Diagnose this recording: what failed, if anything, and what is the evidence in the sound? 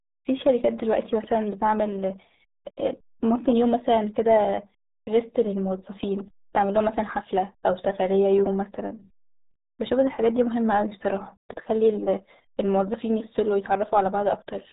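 The failure is at the codec stage: the speech has passed through the RealAudio 14.4 codec (RealAudio 1), a low-rate dial-up-era speech coder, and the damage is heavy across the whole clip. Nothing survives above about 3.8 kHz, which fits an 8 kbit/s stream that spends its few bits only on the core speech band. The coarse frame-by-frame modelling leaves the speech muffled and gargly, with sibilants and consonant edges dulled away.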